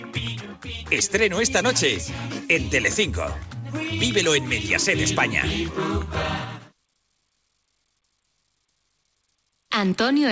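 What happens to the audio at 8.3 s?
Nothing goes wrong at 8.3 s: the audio carries on intact there, with only the steady upper limit near 8 kHz that the G.722 call path gives the whole recording.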